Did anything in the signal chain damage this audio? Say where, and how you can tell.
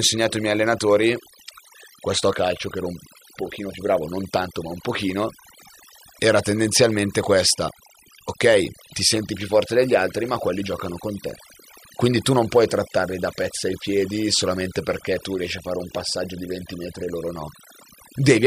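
Yes: overdone noise removal throughout, at the call-processing stage. An over-aggressive noise reducer shuts off bands near its noise estimate, breaking the background into twinkling, warbling specks.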